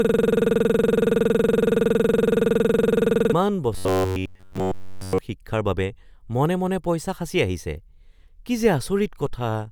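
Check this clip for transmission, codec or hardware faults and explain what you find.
Two faults are audible, both from audio delivery failing to keep up.

From the very start, already under way at 0.00 s and lasting until 3.33 s, there is a system hang loop. The machine or its audio driver stalled while the sound hardware kept replaying the same ring buffer. A 46 ms segment, which fits a 2048-sample buffer, repeats exactly, giving a machine-gun stutter at about 21.5 Hz with no new audio getting through.

From 3.73 s to 5.18 s the voice takes on robotic sound from repeated short buffers. The likely cause is audio arriving too infrequently, with the playback path filling the gaps by repeating its most recent short buffer while the real material is dropped. Essentially the entire stretch is repetition, and a fixed 93.8 Hz buzz is imposed on the voice, pointing to a buffer of roughly 11 ms. 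The speech turns into a rigid, metallic buzz that follows the original only roughly.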